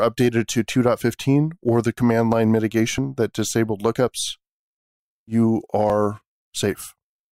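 Speech, with two small jumps from overlap between stream segments. Right after "or the", at 1.98 s, there is a tiny skip. Another follows from 5.90 to 5.92 s. Both times, overlapping time stamps on 1.0 s segments made the player discard real audio.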